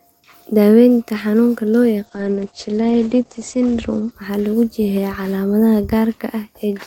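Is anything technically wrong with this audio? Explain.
Yes. Call bitrate drop, 2.06 to 4.17 s, after "xanuunka loo": the encoder falls from 64 to 12 kbps and bandwidth from 20 kHz to 8 kHz, leaving the speech coarse and muffled.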